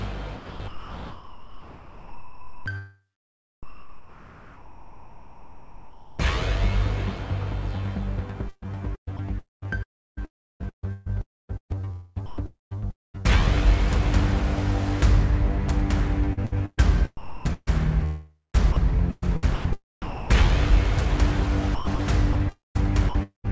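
From 0.36 to 2.66 s the audio is chopped by the voice detector: about 2.2 s of quieter material drops out in pieces, likely because the sender's detector kept toggling transmission off and filling gaps with comfort noise. The sound stutters. On a waveform the quiet edges flatten into uniform hiss. On a spectrogram they become smooth, textureless noise that stops at 8 kHz, the ceiling of the G.722-like call path.

From 3.63 to 6.19 s, comfort noise replaces the background for about 2.56 s. The real background, about 21 dB below the loud parts, is swapped for steady, featureless noise about 10 dB quieter. This is likely discontinuous transmission with synthetic fill during a pause. On the waveform the floor visibly drops, and on the spectrogram the detail gives way to an even, flat wash.

The chopping returns across 8.49 to 13.41 s, with a denser burst from 11.21 to 13.16 s. It recurs at 16.33 to 19.44 s, 18.05 to 20.79 s and 19.55 to 20.30 s, then at 21.75 to 23.49 s. 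Each stretch shows the same gated-off edges and patches of smooth hiss.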